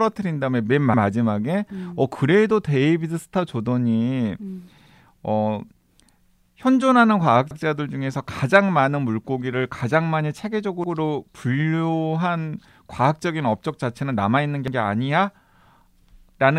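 Repeated buffer stutters at 0.94, 4.78 (repeated twice), 7.51, 10.84 and 14.68 s: late audio made the device replay its last 85 ms block, seen as identical waveform copies with sharp vertical seams.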